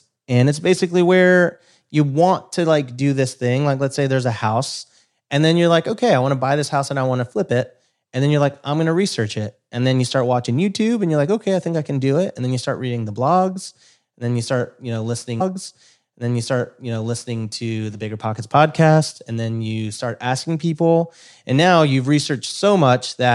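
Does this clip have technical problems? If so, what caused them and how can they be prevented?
Yes. At 15.40 s the speech jumps back and replays the preceding stretch, so the audio from 15.40 s to 17.39 s repeats material already heard. This is a stream segment repeated: the player fetched or queued the same segment twice and played both copies, adding about 2.0 s to the programme, with a small blip at the jump back. Prevention: track segment sequence numbers in the player and drop any segment whose index has already been queued.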